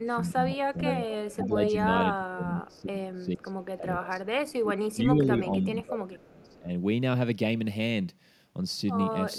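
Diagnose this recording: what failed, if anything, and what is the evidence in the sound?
Call processing is the failing stage: the echo canceller likely misjudged moments when both ends were talking at once and clamped the whole signal. The result is speech suppressed in double talk, with the level dipping or breaking into fragments over 0.00 to 0.84 s, 1.34 to 1.75 s, 2.14 to 4.24 s, 4.62 to 5.65 s and 5.82 to 6.70 s. The drops reach about 15 dB in most of these and about 25 dB in the long 2.14 s stretch.

The same call-processing stage also lets loudspeaker pickup through, likely from a far end on speakerphone whose canceller left residue uncancelled. This echo leak returns a copy of the speech delayed by 469 ms. At 0.85 to 1.47 s it is strong, only about 5 dB below the direct speech. At 2.74 to 2.81 s and 6.21 to 6.56 s it is only a faint scrap, around 35 dB down.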